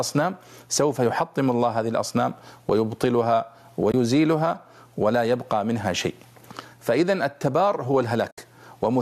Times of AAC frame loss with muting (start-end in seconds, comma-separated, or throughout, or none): 3.92-3.94, 8.30-8.38